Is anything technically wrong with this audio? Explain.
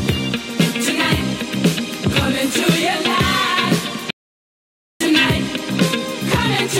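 Yes, there's a playback stall. At 4.10 s the sound just cuts out mid-flow and stays silent for roughly 0.9 s, picking up again at 5.01 s. The player likely ran dry of buffered data or had its thread blocked until it caught up.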